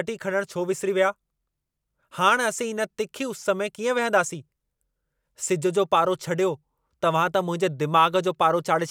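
No technical faults can be heard anywhere in this recording.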